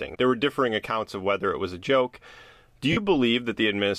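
At 2.92 s the speech breaks into a brief grainy, noisy smear lasting about 45 ms, with the sound thinning out toward 2.97 s before normal speech resumes. These are lost LE Audio frames. When frames fail to arrive, the LC3 decoder repeats the last spectrum with scrambled signs and fades it. The 45 ms gap fits about six consecutive 7.5 ms frames. The surrounding audio carries light LC3 compression, likely at a moderate bitrate.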